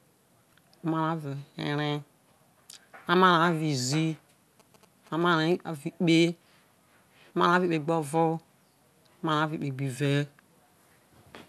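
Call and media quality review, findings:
0.50 to 0.53 s: brief glitch. Damaged data in a compressed stream, probably in the decoder input. Corrupt bytes break a frame, decoder loses sync and hunts for the next header, dropping a sliver of audio.

4.60 to 5.56 s: galloping dit-dit-dit of short 217 Hz buzzes, faint, well under the speech. GSM signalling bursts from a nearby 2G phone. The audio circuit is rectifying the radio bursts. Worth checking mic cable shielding and phone placement.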